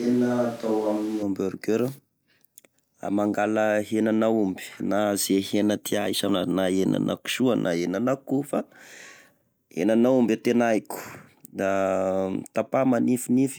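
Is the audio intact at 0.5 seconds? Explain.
No. From the start until 1.23 s, the close microphone's signal is likely missing and a more distant microphone is carrying the speech. That switch to a distant microphone makes it sound roomy, hollow and thin in bass, at about the same level, with room noise roughly 25 dB below.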